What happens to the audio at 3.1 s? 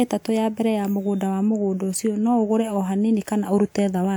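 Nothing goes wrong at 3.1 s; the speech plays through that moment intact, with no dropout, click or other fault.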